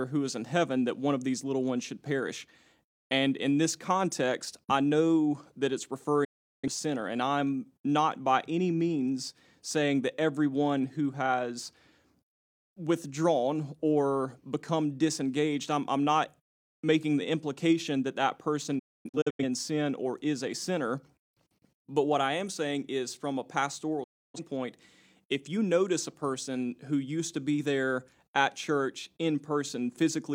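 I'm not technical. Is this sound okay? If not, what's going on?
No. The speech drops out three times. This is a digital broadcast dropout. The receiver lost the signal for a moment and went silent until clean data returned. The sound fades out very quickly, then comes back. At 6.24 s about 0.38 s is missing. At 18.79 s the gap is broken into several short holes over about 0.6 s, the longest about a quarter second. At 24.04 s about 0.3 s is gone. Whatever was said in those gaps is lost.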